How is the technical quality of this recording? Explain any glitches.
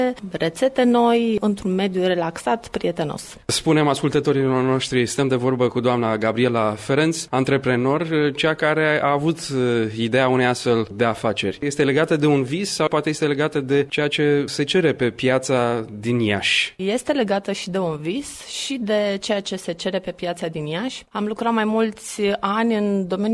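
Nothing in this recording stood out as a glitch on listening.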